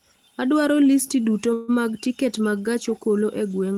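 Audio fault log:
1.53–1.76 s call audio freeze: packets were likely held up in transit and the jitter buffer ran dry, so the receiver stretched the last sound into a fading buzz or hiss for 148 ms. The speech then resumes where it stopped, with nothing lost but everything after arriving 148 ms late.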